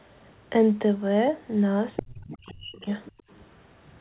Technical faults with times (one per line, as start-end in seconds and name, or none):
1.96-2.03 other side's voice leaking through
1.99-2.88 speech suppressed in double talk
2.29-2.80 other side's voice leaking through
3.05-3.41 other side's voice leaking through
3.16-3.27 background gated by the echo canceller